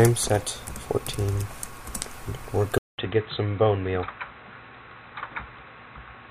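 At 2.78 s the input likely switched to a poorer device, as if the recording moved to a different microphone or a headset's call profile partway through. A gap of about 200 ms marks the changeover, and from there to the end the sound turns dull and boxy, with nothing above 4 kHz, a level roughly 5 dB lower, and new background noise sitting around 40 dB below the signal.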